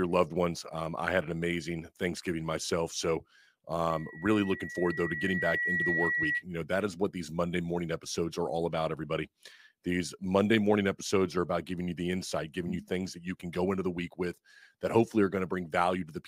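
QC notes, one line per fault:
3.89–6.44 s, loudspeaker feedback squeal: a steady 1.9 kHz tone rises out of the speech, swelling over roughly two seconds until it sits about as loud as the speech itself, then holds until 6.44 s. The microphone is hearing its own loudspeaker, and at 1.9 kHz the round trip through the loop returns more signal than it sent, so that one frequency keeps feeding on itself and grows instead of dying away.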